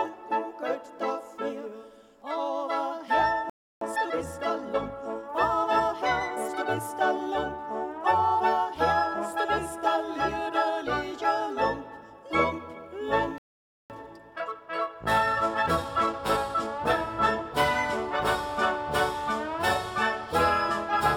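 The player likely ran short of buffered data, or its output thread was held up. At 3.50 s the audio drops out mid-flow into a playback stall lasting about 0.32 s, then resumes at 3.81 s. It happens again from 13.38 s to 13.90 s, a longer gap of about 0.52 s. In both cases the sound simply stops dead, leaving an abrupt, noticeable hole before it carries on.

After each stall the player works off its backlog by snipping out small slices of audio and cross-fading across the joins. That is time-compressed catch-up. From 3.81 s to 6.81 s the audio runs at about 1.1 times normal speed. From 13.90 s to 16.90 s it runs at about 1.15 times. The pitch stays where it should be, but the sound feels hurried. The second catch-up is the more rushed of the two.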